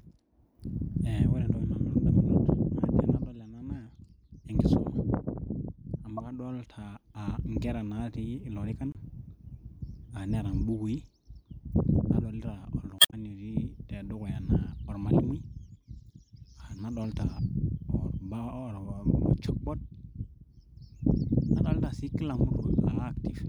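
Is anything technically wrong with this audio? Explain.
Yes. Damaged data in a compressed stream causes three brief faults in this speech, at 6.17–6.20 s, 8.92–8.97 s and 12.97–13.14 s. Corrupted bytes make the decoder misread frames and lose sync, producing short chirps, squawks, clicks or holes; the last one also inserts about 44 ms of extra time.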